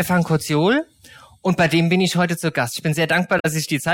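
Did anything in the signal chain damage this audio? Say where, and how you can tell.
Yes, damaged data in the compressed stream: a short blip from 3.38 to 3.45 s, where the decoder misread corrupted frames and lost sync before finding the next header.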